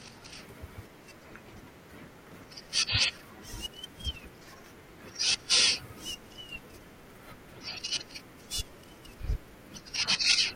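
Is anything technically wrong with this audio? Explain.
No, nothing is technically wrong with this audio.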